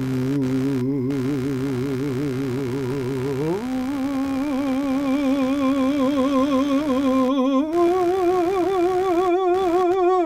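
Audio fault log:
throughout, computer activity noise: a buzzing, chirping layer pulses at around 70 times a second, sitting roughly 20 dB below the music and shifting with the computer's workload rather than the playing, because processor, graphics or mouse load changes disturb the audio circuit's shared ground.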